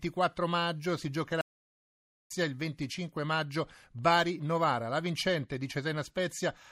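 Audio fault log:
1.41–2.31 s, playback stall: the speech cuts to silence right after "maggio si" and stays silent for about 0.9 s, then carries on from where it stopped. The likely cause is the player running out of data or its output thread being blocked.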